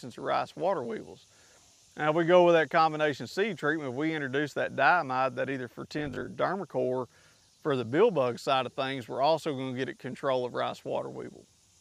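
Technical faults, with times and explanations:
5.99 to 6.29 s, robotic sound from repeated short buffers: the sound hardens into a rigid, metallic 50 Hz buzz. A 20 ms stretch of audio was likely being replayed whenever new data arrived late, with about a third of the sound affected.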